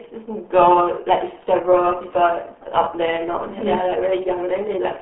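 From start to finish the speech sounds muffled and gargly, with a watery, bubbling texture on every syllable and no brightness left in consonants. There is no content above about 3.8 kHz, and the band sits roughly between 200 Hz and 3.4 kHz like a phone line. This is the RealAudio 14.4 codec, the old dial-up speech coder, applied heavily. Its damage points to a rate near 8 kbit/s, too little data to keep the detail of the voice.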